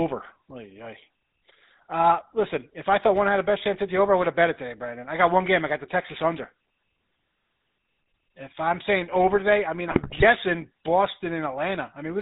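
From start to finish the speech carries the coarse, buzzy grain of the GSM full-rate codec, and the sound points to the original 13 kbps mode. The codec rebuilds each frame from a vocal-tract filter driven by regularly spaced excitation pulses, with only one sample in three of that excitation retained. Nothing above 4 kHz survives, so sibilants are dull. The sparse excitation gives voiced sounds a gravelly roughness that is plainly audible throughout.

From 9.88 to 10.23 s, GSM bit errors break up the decoded speech for about a third of a second. Corrupted bits have reached the decoder, and the damage fits roughly 17 consecutive frames hit, at an error rate near 4%. Wrong filter, pitch and gain parameters make those frames decode with a warped spectrum and sudden level jumps. The result is a burst of squawks, pops and gargling before the codec-coloured speech resumes.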